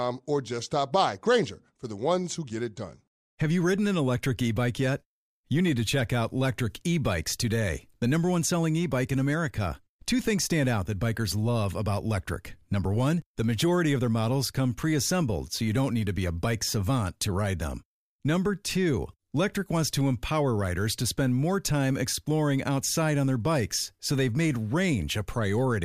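No technical faults are audible anywhere in the recording.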